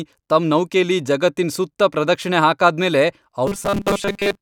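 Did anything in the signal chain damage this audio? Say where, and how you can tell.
Yes. Near the end, from 3.47 s to 4.42 s, the speech takes on a robotic sound from repeated short buffers, most likely a driver or buffer underrun. Fresh audio stops arriving in time, so the playback path keeps looping the last short chunk and most of the real signal is skipped. The loop sets a rigid 200 Hz buzz, which fits a 5 ms repeated block. The speech becomes a metallic drone that only loosely tracks its original shape.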